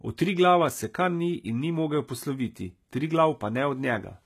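From start to finish the speech carries plainly audible codec damage, most likely HE-AAC compression at a low bitrate, around 20 kbps. The treble is not the original but is rebuilt from copies of lower bands, so s sounds come out gritty, metallic and lispy. On a spectrogram the upper region shows repeated, blocky patches whose harmonics fail to line up with those below the crossover, and nothing at all above 14.9 kHz.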